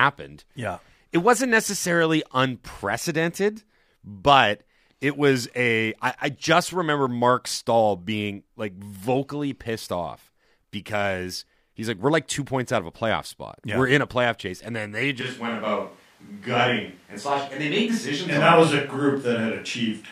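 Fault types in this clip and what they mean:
Switch to a distant microphone, from 15.21 s to the end: the sound turns suddenly roomy and hollow, with thinner bass and more of the room's reflections, and it never returns to the close sound. The level barely changes, but background noise rises to roughly 35 dB below the speech. The likely cause is that the close microphone's signal dropped out and the recording fell back on one placed farther from the talker.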